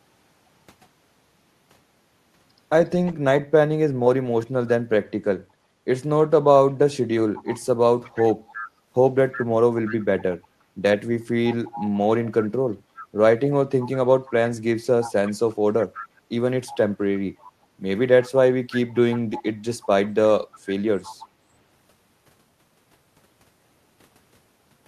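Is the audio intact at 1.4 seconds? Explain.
Yes, the speech at 1.4 seconds is intact, with no fault audible at that moment.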